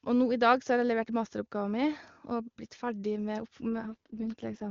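An AMR rate drop affects this speech clip from 3.75 s to 4.69 s. The voice turns rough and synthetic with no gap and no loss of band, which fits the AMR-WB (HD Voice) codec falling from about 23.85 to 6.6 kbit/s and spending bits on error protection.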